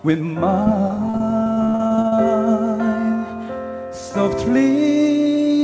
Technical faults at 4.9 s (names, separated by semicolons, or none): none